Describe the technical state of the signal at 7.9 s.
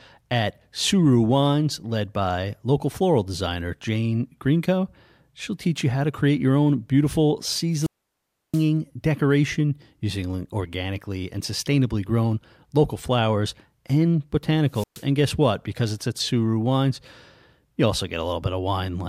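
At 7.9 s the signal is inside a wireless microphone squelch dropout, spanning 7.71 to 8.69 s. It follows "create your own beautiful" with a brief rise of hiss. The receiver then mutes for about 0.67 s as the radio signal fades. Speech resumes at "decoration using organically and".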